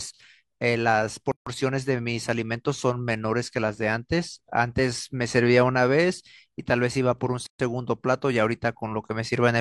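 At 1.32 to 1.47 s and again at 7.47 to 7.60 s, speech stops for about 150 ms and 130 ms. These are gaps at a join of encoded pieces, six seconds apart, where encoder start delay and last-frame padding were left untrimmed. Each gap has smeared edges, and speech resumes where it stopped.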